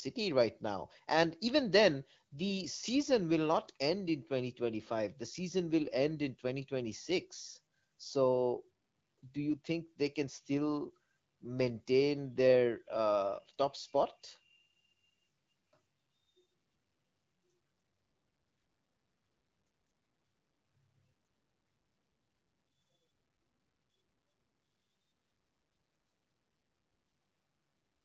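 No technical faults can be heard in this speech, which reaches the listener through an AMR wideband (HD Voice) link at 12.65 kbit/s, carrying only the light coding character that rate brings.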